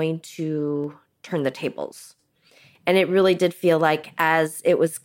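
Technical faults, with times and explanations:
0.84 s and 2.75 s, dropped samples: two sharp clicks in the speech, the first just before "turn the tables" and the second just after it, each most likely from a fraction of a millisecond of samples going missing. The waveform steps abruptly between values, drawing a thin vertical line across the spectrogram.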